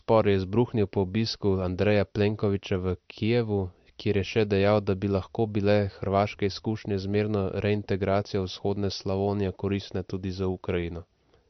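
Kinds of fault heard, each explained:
MP3 compression: The speech loses everything above 6.1 kHz and carries plainly audible watery, swirly damage, likely from MP3 encoding at a bitrate that fits about 48 kbps. A spectrogram shows a flat ceiling at 6.1 kHz, with speckled gaps flickering between frames below it.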